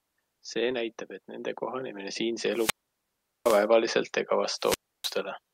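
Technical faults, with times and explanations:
2.51–3.67 s and 4.57–5.19 s, wireless microphone squelch dropout: twice the radio link from the analogue FM microphone weakens until the receiver's squelch gate shuts the output off. Each event begins with a short surge of hiss or static as the carrier fades, then falls into near silence, about 0.76 s in the first and about 0.30 s in the second, before the speech comes back once the signal recovers enough for the squelch to reopen.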